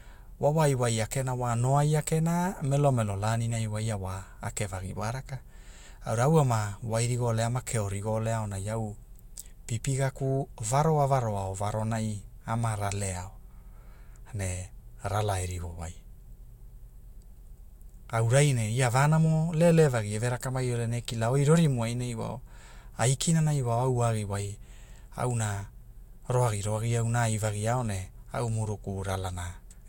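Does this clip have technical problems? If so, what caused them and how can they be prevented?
No, this clip has no technical problems, so there is nothing to trace to a cause or to prevent.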